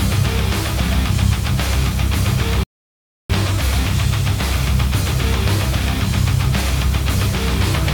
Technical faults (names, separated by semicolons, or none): low bit depth without dither; rebuffering stall